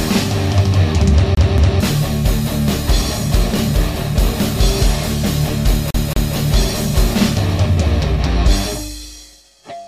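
At 1.35 s the sound catches on itself. It is a CD stuck on one turn. A scratch knocks the laser back a track each rotation. The same 0.23 s fragment plays twice, with a brief mute at each jump. The stutter ends at 1.80 s. It returns from 5.91 s to 6.36 s. The loop is again 0.23 s long and repeats twice. Both bursts give the quick, even judder of a skipping disc.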